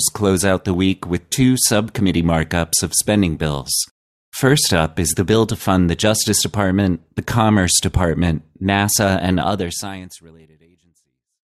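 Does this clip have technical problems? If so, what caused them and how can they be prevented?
No, nothing stood out on listening to this speech clip, and the gentle fade-out over the last couple of seconds sounds like a deliberate edit.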